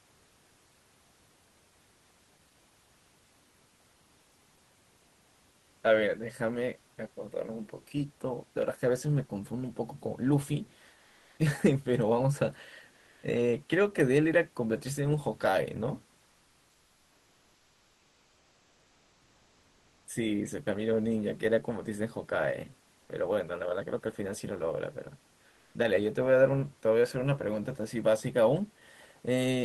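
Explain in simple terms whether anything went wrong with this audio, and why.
In the pauses between speech, the background hiss briefly turns flat and featureless: from 10.99 to 11.35 s, 12.91 to 13.21 s, the longest stretch from 16.33 to 20.05 s, and 25.51 to 25.69 s. In the first two it is also slightly louder. This is comfort noise in place of the background. The likely cause is discontinuous transmission: the call stops sending audio when nobody talks, and the receiver fills the gap with generated noise instead of the real room sound.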